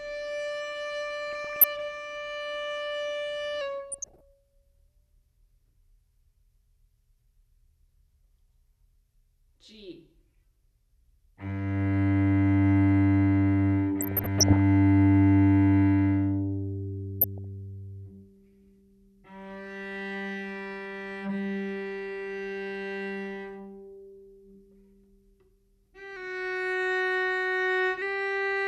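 DAB burbling first appears at 1.32 to 1.64 s: weak reception let bit errors slip past error correction, corrupting samples and scale factors, so individual sub-bands jump in level frame by frame. It sounds like short blips of noise over the sound.

A drift correction step follows from 3.61 to 4.88 s. Speed drops by 5.6% and pitch falls by about a semitone (100 cents), then snaps back. This is likely a clock-matching playback-rate change that refilled the buffer. Further burbling overlaps it at 3.91 to 4.21 s.

Burbling recurs at 14.01 to 14.57 s, the longest burst, and at 17.21 to 17.44 s. The same one-semitone drop returns from 26.16 to 28.02 s before pitch restores.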